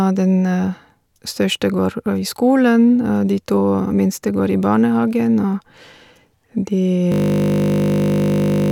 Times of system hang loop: 7.12-8.71

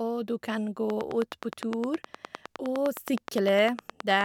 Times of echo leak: none

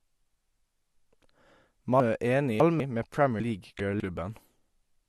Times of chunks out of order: 2.00-2.80, 3.40-4.00

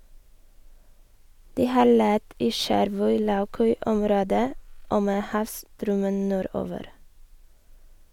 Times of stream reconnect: none

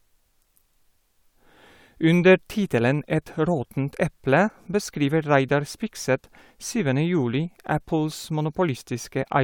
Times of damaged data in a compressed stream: none

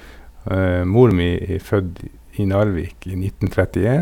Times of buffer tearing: none

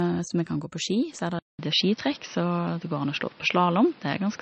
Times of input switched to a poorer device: 1.39-4.42

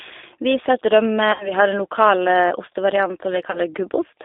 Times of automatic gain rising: none

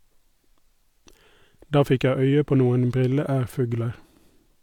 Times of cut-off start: none

